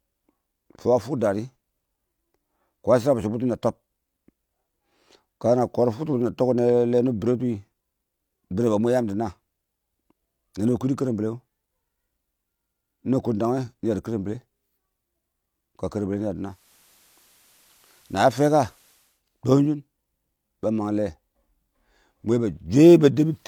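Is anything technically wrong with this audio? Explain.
Yes. From 16.38 to 19.24 s there is digital radio blending to analogue: the receiver lost its digital stream and cross-faded over about 346 ms to the FM signal of the same station, then back. The speech gains hiss roughly 35 dB down and drops about 1 dB.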